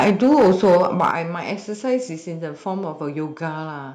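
From 0.0 to 1.11 s the loudest syllables crackle with a hard, flat-topped harshness, likely microphone overload with peaks about 8 dB past the converter's limit, clipping around 7% of samples. Limiting would sound dull, not crackly. At 0.1 s and 1.11 s the voice and background drop abruptly, by about 3 dB and then about 9 dB, likely the microphone volume stepped down by the call software, in instant steps rather than a gradual fade.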